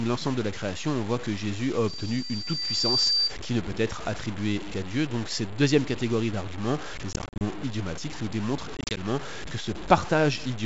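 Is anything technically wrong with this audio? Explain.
Yes, there are three problems in this speech clip.

Low bit depth without dither runs throughout. The speech sounds gritty and grainy, with distortion that tracks the voice, probably from truncation to about 6 bits, leaving noise only about 15 dB below the signal.

A loudspeaker feedback squeal runs from 1.87 to 3.34 s, just before "qui ne peut être". A loop between the loudspeaker and the microphone gains above unity at 4.7 kHz, so that tone swells over roughly a second until it is louder than the speech.

Packet loss on an ADPCM call occurs twice. The first is from 7.13 to 7.43 s, after "cette deuxième catégorie d'arguments", with 160 ms missing across 280 ms. The second is from 8.77 to 9.00 s, after "idiomatiques nous démontrent", with 100 ms missing across 200 ms. Short silent holes of up to 40 ms leave the decoder's predictor out of step with the sender's, so the speech returns slightly distorted.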